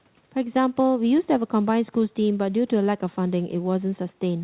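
No technical faults are audible.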